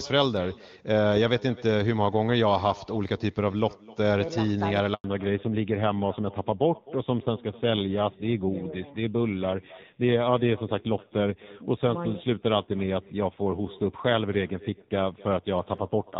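From the start and for the whole clip, every phrase is trailed by a faint, thin repeat around 300 ms later and about 22 dB below the direct speech. That is echo with no canceller: the far end is playing the call through a loudspeaker, its microphone is picking that up, and nothing on that side strips it out before it travels back.

At 4.94 s the speech collapses into silence for 100 ms, resuming at 5.04 s. This is a handover gap: the call was moved from one network to another, and during the switch no speech frames arrived at all. The voice dies away quickly rather than fading, and whatever was said in that tenth of a second is simply missing.

From 5.04 s to the end there is a fallback to narrowband. Before the gap, the wideband HD Voice codec carries clear speech with little audible coding damage, the kind of quality that fits AMR-WB at its top rate of around 23.85 kbit/s. After it, nothing above 4 kHz remains. 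The sibilants lose their crispness and the voice turns duller and somewhat rougher, which points to a narrowband AMR codec running at a modest rate such as 7.4 kbit/s.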